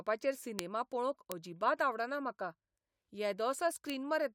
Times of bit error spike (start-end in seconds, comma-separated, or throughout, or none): 0.59, 1.32, 3.90